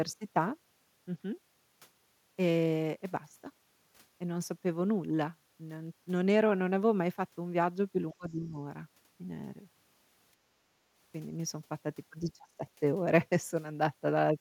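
At 8.12 s the speech drops sharply until 8.58 s, falling by roughly 25 dB at its deepest. A shorter, milder dip follows from 12.42 to 12.61 s, around 15 dB down. Both fit speech suppressed in double talk. The likely cause is an echo canceller that could not tell the talker from returning loudspeaker echo. It then turned both down.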